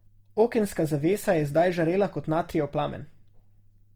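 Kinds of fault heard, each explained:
Opus compression: The speech sounds rough and grainy throughout, which likely comes from Opus music mode at a low rate near 24 kbps. It keeps full bandwidth up to about 20.2 kHz.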